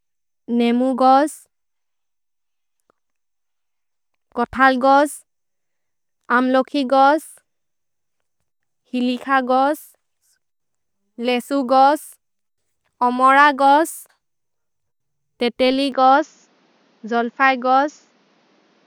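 Input likely switched to a poorer device at 15.92 s: from there on the sound dulls, with nothing above 7 kHz and a faint new noise floor.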